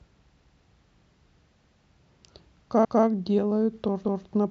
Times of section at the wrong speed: none

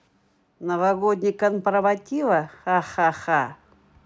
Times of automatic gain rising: 0.61-3.57

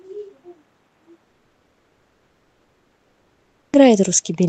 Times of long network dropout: 1.23-3.80

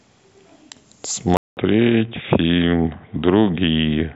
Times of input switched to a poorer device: 1.37-4.16

